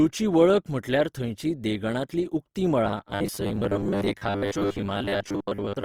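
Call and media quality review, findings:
Opus compression, whole clip: likely codec at a low rate, music (CELT) mode, fits roughly 24 kbps. Bands starved of bits get filled with folded or noise content. The speech sounds plainly grainy and rough, though the band stays full, reaching about 20.3 kHz.

Robotic sound from repeated short buffers, 2.85 s to end: audio delivery falling behind, likely playback buffer underrun. A short chunk is replayed instead of new audio, about half the time. The result is a rigid 100 Hz metallic buzz, consistent with a 10 ms buffer.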